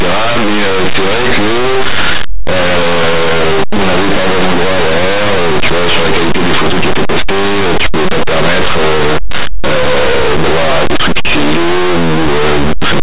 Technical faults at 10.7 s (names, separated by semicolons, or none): linear audio read as companded